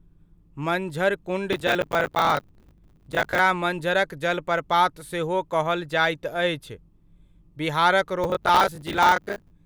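Processor overload crackle runs from 1.53 to 3.39 s and again from 8.24 to 9.51 s. Buffers of around 10 ms miss their deadlines repeatedly and replay old audio, producing sustained gritty tearing rather than one isolated dropout click.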